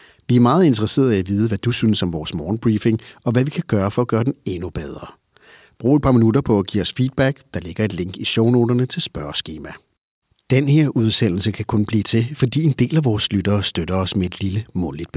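Nothing technically wrong can be heard in this speech recording: the signal stays intact and continuous throughout.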